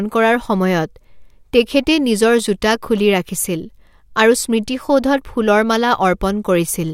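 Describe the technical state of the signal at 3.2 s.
The signal at 3.2 s is intact, with no audible fault at that point in the speech.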